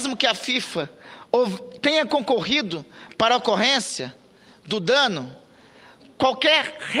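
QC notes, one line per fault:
No faults were found in this clip. Nothing in the audio needs a time or a note.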